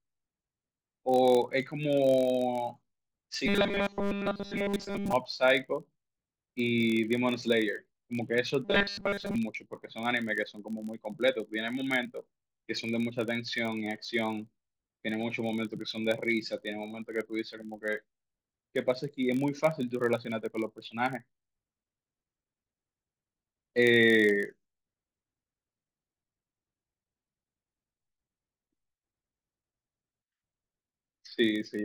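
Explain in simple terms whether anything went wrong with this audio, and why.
Filter restarted on every block, throughout: a filter resets every block, likely 1024 samples, so each begins with a tiny tick, giving a steady 43 Hz buzz.

Robotic sound from repeated short buffers, 3.46–5.13 s and 8.65–9.35 s: the speech turns metallic with a fixed 200 Hz buzz, likely from a 5 ms snippet being replayed while fresh audio is skipped.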